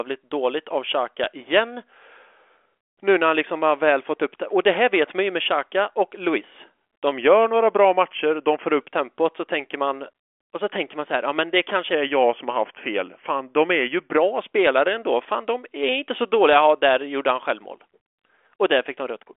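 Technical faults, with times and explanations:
7.12 to 8.81 s and 11.93 to 14.17 s, drift correction step: the speech abruptly slows by about 6.2% and drops about 112 cents, just over a semitone, then snaps back to normal. This is likely clock-matching software changing its playback rate in a single step to rebalance a buffer. Speed and pitch move together and hold steady, unlike tape wow, which wavers gradually, or pitch correction, which changes pitch alone.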